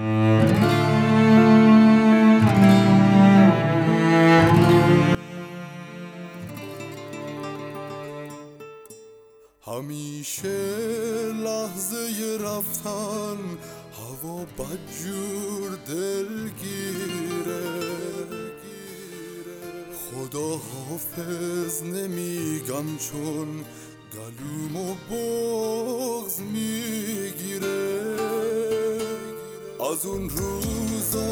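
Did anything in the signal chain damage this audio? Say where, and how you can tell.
Yes: from 5.15 s to the end, one channel is inverted, likely from reversed wiring polarity. Summed to mono, the shared centre cancels, leaving a remnant about 21 dB quieter.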